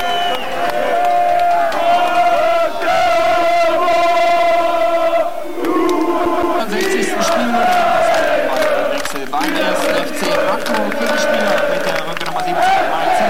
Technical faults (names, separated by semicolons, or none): CD stuck on one turn